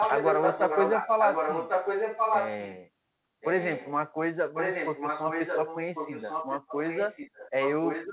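A speech recording in which a second copy of the talker trails the original by about 1.1 s. From 0.0 to 2.72 s the delayed copy is roughly as loud as the speech itself, then it returns more faintly from 3.41 to 3.94 s and somewhat quieter than the speech from 4.54 s to the end. This is echo leak, likely from a far end playing the call on a loudspeaker whose echo canceller let part of that playback back into the return path. Everything is band-limited to below 4 kHz, consistent with a G.711 mu-law call path.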